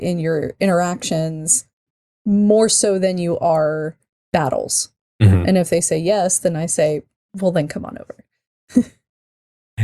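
At 6.61 s, just after "they say yes then", one sharp click cuts the speech. This is likely dropped samples: a handful skipped, so the waveform jumps abruptly.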